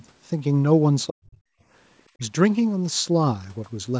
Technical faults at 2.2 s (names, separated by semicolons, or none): speech suppressed in double talk